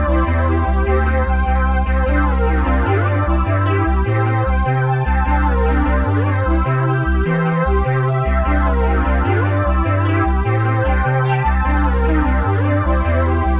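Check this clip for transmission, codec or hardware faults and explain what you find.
No faults found; the audio shows only the narrowband character of a call path, with nothing above 4 kHz, which fits a G.711 A-law link.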